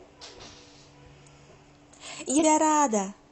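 At 2.37 to 2.43 s the speech breaks into a brief glitch from damaged data in a compressed stream: corrupted frames are misdecoded until the decoder resyncs. On a spectrogram this shows as a 60 ms disrupted block; the waveform looks discontinuous.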